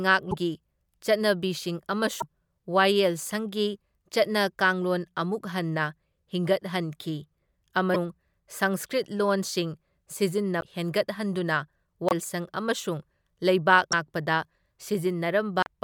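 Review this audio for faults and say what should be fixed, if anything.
Short chirps and noise bursts, each with a small skip forward, break into the speech at 0.30–0.34, 2.20–2.23, 7.93–7.96, 10.60–10.63, 12.09–12.13, 13.91–13.93 and 15.61–15.67 s. Each lasts about one or two 24 ms frames. The likely cause is a broken MP3 bit reservoir. After frames were cut out, the next frame reached back for its borrowed data and decoded bytes that belonged to a different frame.

To prevent this, cut or splice MP3 streams only where no later frame depends on the removed ones, or re-encode from the original source instead of trimming the compressed file.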